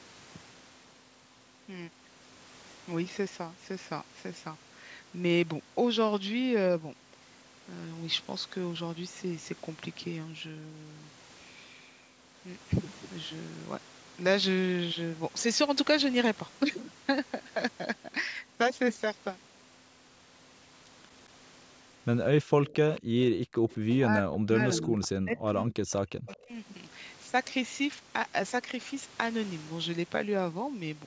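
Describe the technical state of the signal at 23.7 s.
At 23.7 s a faint, brief copy of the speech appears from 23.7 to 23.75 s, roughly 30 dB below the direct signal and trailing it by 217 ms. This is likely an echo leak, where a loudspeaker's output slipped past the far-end echo canceller. On a spectrogram it shows as a weak ghost of the preceding harmonic pattern, shifted about 0.22 s later.

It follows directly on background gated by the echo canceller, from 23.01 to 23.68 s. The canceller pulled the microphone down by as much as about 40 dB for roughly half a second in total, so the room sound dropped out and then returned. The waveform's noise floor collapses to a near-flat line there, and the spectrogram shows a dark gap across the background.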